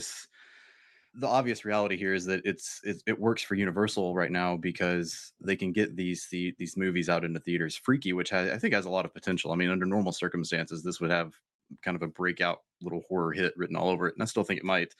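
No technical faults can be heard anywhere in the speech.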